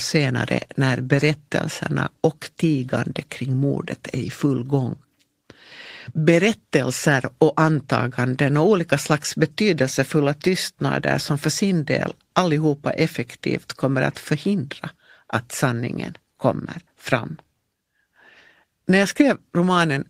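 No technical faults can be heard anywhere in the recording, and the signal stays steady throughout with nothing audibly going wrong.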